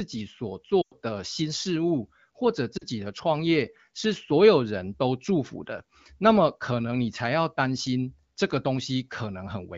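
At 0.82 to 0.93 s and again at 2.77 to 2.84 s there are lost AMR speech frames. The wideband decoder stretches the last good frame, fading it quickly to near silence, which points to runs of about five and two frames.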